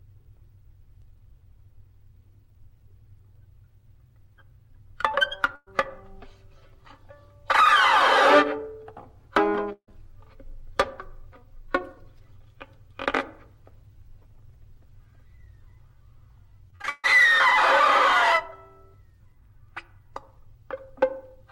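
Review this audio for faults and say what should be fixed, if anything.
At 5.55 to 5.68 s and 9.72 to 9.89 s the sound smears into a held, fading tail, then jumps ahead. These are bursts of packet loss: the receiver stretched the last audio over about 110 and 150 ms, dropping 120 and 160 ms of material, with brief silences of 20 and 80 ms.

From 16.70 to 17.06 s the audio turns choppy. This is repeated packet loss (robotic sound): several holes, the longest 141 ms, were each patched by extending earlier audio, so about two-thirds of that stretch is filler and 240 ms is missing.

To prevent this, fix the network path causing the drops, and enlarge the jitter buffer or add forward error correction so lost or late packets can be recovered.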